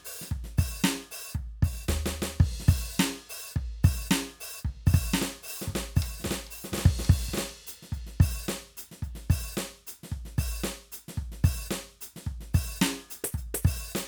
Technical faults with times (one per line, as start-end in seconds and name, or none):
4.66-7.54 doubled audio track